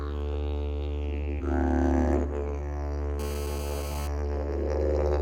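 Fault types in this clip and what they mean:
Skip ahead: At about 1.39 to 1.41 s the audio jumps forward with no fill, so the material on either side is joined almost directly. About a second of audio is simply absent. This is the sound of a stretch being discarded while later audio was already queued, either lost in transit or dropped when the jitter buffer overflowed. The delay falls by roughly the same amount at that moment.
Jitter buffer speed-up: From about 2.15 to 2.97 s the sound runs fast, at about 115% of normal speed, while the pitch stays the same. The receiver is trimming short segments of one or a few pitch periods, one after another, to shrink a buffer that had built up more audio than its target. Roughly 150 ms is removed over this stretch, which makes the passage sound hurried.
GSM phone buzz: From about 3.19 to 4.08 s a hard, raspy buzz sits under the signal at about 13 dB below it. 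Its 217 Hz fundamental, rich in harmonics, is the burst rate of a nearby 2G handset. The audio circuitry rectifies the radio pulses into this tone, which is unrelated to the wanted sound. The buzz holds steady throughout, consistent with the phone being in a call rather than a data transfer.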